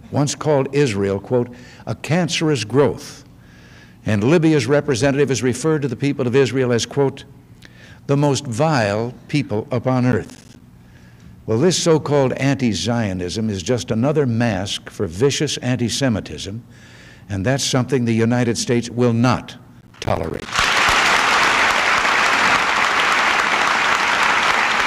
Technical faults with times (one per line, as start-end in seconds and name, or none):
10.12-10.61 processor overload crackle
19.81-20.46 processor overload crackle